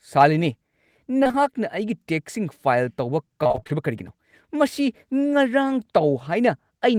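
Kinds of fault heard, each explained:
Short concealed packet loss: three back-to-back gaps at 1.23, 1.27 and 1.31 s, each about 20 ms, were patched by extending the preceding speech and blending back. It sounds like a brief smear; a spectrogram shows smoothed, stretched harmonics without sharp onsets.
Repeated packet loss (robotic sound): from 3.43 to 3.71 s, seven gaps up to 24 ms were filled, concealing half the stretch. The speech turns choppy, and the waveform shows repeated, self-similar cycles with smeared, flattened spectrogram bands.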